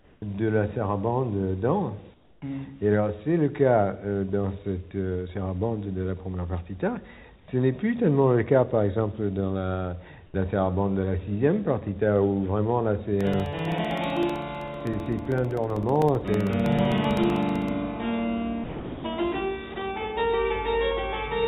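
At the very start (0 to 0.22 s) and again at 2.14 to 2.42 s, 7.40 to 7.48 s and 10.26 to 10.34 s, the quiet background turns into a flat, featureless hiss, quieter each time: about 1 dB, 6 dB, 4 dB and 2 dB down. This is comfort noise in place of the background. The likely cause is discontinuous transmission: the sender stopped sending during these low-level gaps, and the receiver synthesised a rough match of a background that sits about 28 to 33 dB below the loudest parts. From 13.21 to 17.69 s, a steady train of tiny ticks runs through the sound every 64 ms, about seventy in all, each a gap of roughly 2 ms filled with silence. These are periodic USB or driver dropouts, where a recurring background task stalls the audio path at a fixed interval and briefly starves it. At 18.64 to 19.04 s and again at 19.74 to 19.76 s, actual sound is lost and steady noise takes its place for 400 ms and 20 ms. 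This is sound dropped by the voice detector, which likely judged that material to be background and stopped sending it. Throughout, nothing is heard above 4 kHz, which fits a G.711 mu-law call path at 64 kbps.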